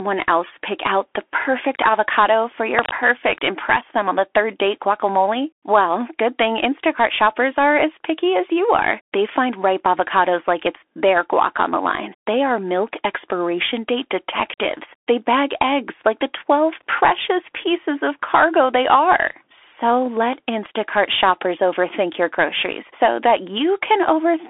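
Bluetooth CVSD headset codec, throughout: the whole clip sounds like a narrowband Bluetooth headset link, consistent with a 64 kbps CVSD stream. The speech sits in a telephone band of roughly 300 Hz to 3.5 kHz, with nothing above 3.8 kHz. CVSD sends a single up-or-down bit per sample and adapts its step size. Here that produces a granular hiss beneath the speech, scratchy s sounds, and distortion where loud, bright sounds change faster than the step can follow.

Cable scratch noise, from 2.70 to 2.92 s: just after "the perfect avocado for" and before "impress them on the", a short burst of dense, irregular crackle cuts across the speech at about the same level as the speech itself. It sounds like a rough, rustling scrape lasting about a fifth of a second. The likely cause is a worn cable or connector being moved, so that its contact resistance jumps around rapidly.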